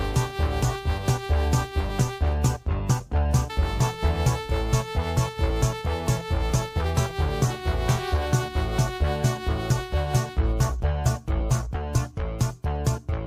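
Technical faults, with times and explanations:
Throughout: clock drift between sender and receiver. The sending clock runs roughly 4 percent fast, so audio arrives quicker than it is played out and the buffer keeps overfilling. Unlike a one-off glitch or a steady pitch shift, this rate mismatch persists under everything.
0.04 to 12.99 s: repeated timing corrections. To keep pace at 104 percent, the receiver trims short pieces again and again, always cutting rather than repeating, at uneven spacing. Each edit is small.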